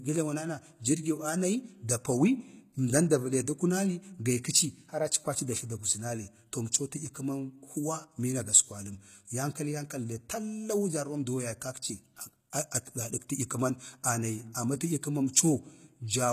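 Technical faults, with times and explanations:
Throughout: HE-AAC compression. The speech has plainly audible codec damage, and nothing is present above about 14.9 kHz. The treble reaches high, but it is not the original detail. It has been rebuilt by copying lower bands upward and shaping them with a coarse envelope, so its harmonics do not line up with those below the crossover. S sounds come out gritty and metallic. The damage level fits a low bitrate of around 20 kbps, which is the likely cause.
12.71 s: Pre-echo. A short hiss of about 10 ms comes in just ahead of a sharp attack, and the onset itself sounds softened and smeared. The transform coder spreads its quantisation noise across a whole block. When a transient lands late in that block, noise sized for the loud part also fills the quiet instant before it, so the hiss is heard before the sound it belongs to.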